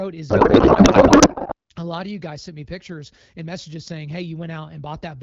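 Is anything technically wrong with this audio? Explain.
Yes. From 0.29 to 1.54 s there is a codec payload misread. The decoder unpacks AMR frames with misplaced bit fields, so the speech becomes garbled, warbling noise.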